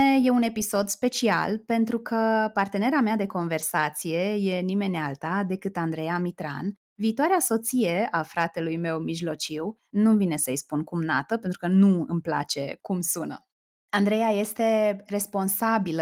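No technical faults can be heard in this speech recording. The Opus voice compression runs in hybrid mode at 24 kbps with fullband coverage, so the high frequencies are kept and the coding leaves only light traces.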